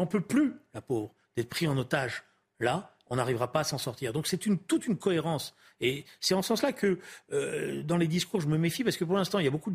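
At 3.72 s, just after "on n'arrivera pas à", a brief click peaking at about -33 dBFS comes from a corrupt FLAC frame: flipped bits derail prediction until the next intact frame.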